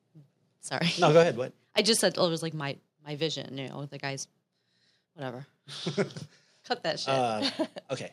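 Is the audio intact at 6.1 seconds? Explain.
Yes, at 6.1 seconds the speech runs on intact, with no dropout, click, distortion or other fault at that point.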